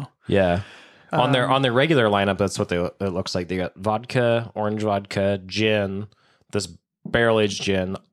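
No technical faults can be heard anywhere in the speech recording.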